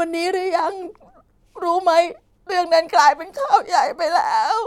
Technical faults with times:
none

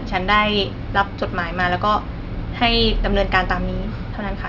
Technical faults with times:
none

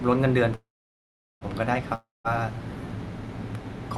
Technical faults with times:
0.55-1.44 call audio freeze
1.95-2.30 long network dropout

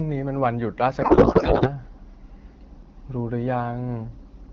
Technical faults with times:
1.01-1.69 codec payload misread

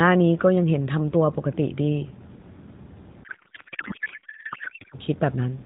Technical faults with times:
3.24-4.98 codec payload misread

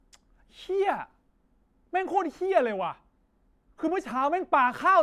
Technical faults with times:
none

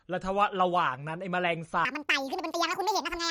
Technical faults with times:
0.00-3.30 MP3 compression
1.85-3.30 section at the wrong speed

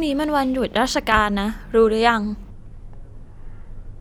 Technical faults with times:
1.12-1.21 loud pop
2.50-4.00 section at the wrong speed

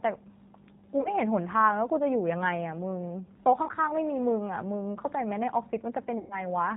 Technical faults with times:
0.00-6.76 G.729 codec
1.02-1.15 VoIP packet loss concealed by the speech codec
3.66-3.71 VoIP packet loss concealed by the speech codec
6.18-6.45 VoIP packet loss concealed by the speech codec

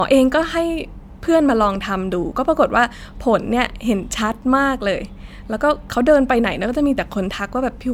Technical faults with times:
0.00-7.93 generation loss

